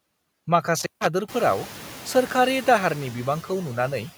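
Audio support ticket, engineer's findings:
Background noise pumping throughout, dropping between phrases and swelling under speech. Noise suppressor artifacts: per-frame attenuation of bands judged as steady noise, cutting roughly 12 dB in gaps. Room noise steps up around 1.5 s.

Crackle, then dropout of about 150 ms with faint hiss, 0.80–1.06 s. Intermittent contact, probably a loose cable or connector. Circuit briefly opens, signal lost, crackle at the make and break edges.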